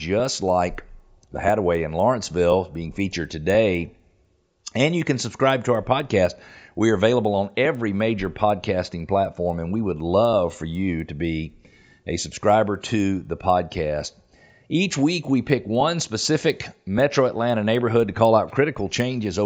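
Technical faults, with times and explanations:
Throughout: resampler restarted on every block, each 250 ms block converted alone from 16 kHz to 48 kHz, so edge errors give ticks at 4 Hz during speech.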